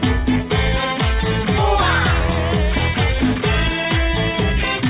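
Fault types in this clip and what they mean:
skip ahead: A block of audio was discarded while later audio was already queued, so playback jumps forward at 1.58 to 1.60 s with no fill. Roughly a second of material is gone, and the two sides are butted together almost seamlessly.
jitter buffer speed-up: With excess audio buffered, the receiver trimmed short pitch-period pieces, about 40 ms in total each time, from 3.40 to 3.85 s (107% speed) and 4.77 to 4.83 s (167%). The sound runs faster at unchanged pitch, band-limited below 4 kHz by the G.711 path.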